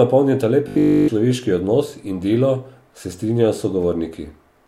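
This speech clip turns into a rigid, metallic buzz from 0.68 to 1.08 s, just before "človeški odnos", with a fixed pitch near 50 Hz and essentially all of that stretch replaced by repeats. This is robotic sound from repeated short buffers, likely caused by audio arriving too slowly, so the software kept looping a tiny slice that fits a 20 ms buffer.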